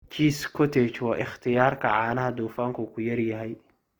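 Opus compression is plainly audible throughout. The speech sounds grainy and rough, likely from music-mode coding near 24 kbps. Bandwidth still reaches 20.2 kHz.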